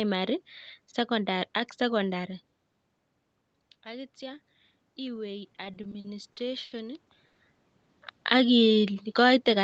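Automatic gain rising from 3.84 to 7.1 s: the input had dropped by about 15 dB, so the gain control slowly added about 6 dB, and voice and background swell together.

Repeated stalls (stutter) from 5.55 to 6.74 s: the jitter buffer kept running dry, and eight short gaps, the longest 70 ms, were filled by stretching sound, so the speech drags.

Call audio freeze from 7.27 to 7.42 s: about 120 ms of continued, fading buzz or hiss fills the pause, likely from packets held up in transit, before speech resumes with nothing missing.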